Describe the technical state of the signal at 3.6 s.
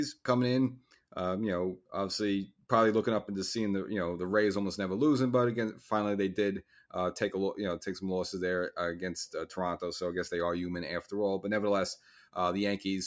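At 3.6 s the speech signal is intact, with no audible fault at that moment.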